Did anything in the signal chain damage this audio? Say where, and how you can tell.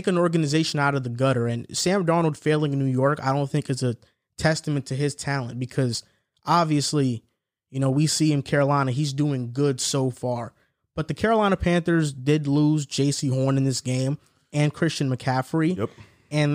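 No, nothing in the signal chain damaged this speech.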